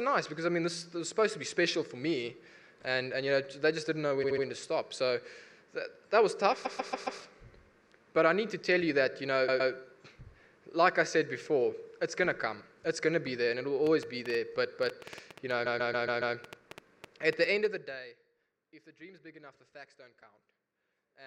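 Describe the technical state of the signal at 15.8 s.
At 15.8 s a train of clicks (13.87 to 17.66 s) is running: about 20 similar pops, roughly 7 per second at uneven spacing and peaking about 5 dB above the sound, likely from interference or a faulty connection. Unlike a stutter, the pops ride over the sound without repeating it. Overlapping them, repeated frames from 15.65 to 16.35 s replay one 139 ms block five extra times, adding about 0.7 s. This is heard as a rhythmic stutter of the same audio.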